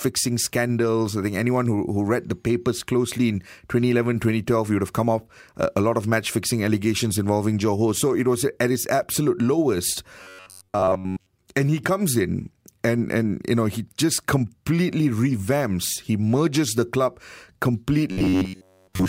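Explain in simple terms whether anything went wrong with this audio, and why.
Robotic sound from repeated short buffers occurs at 10.23 to 11.30 s and from 18.12 s to the end. The speech becomes a stiff, metallic buzz near 94 Hz, likely because new audio arrived late and the software kept replaying the last 11 ms instead.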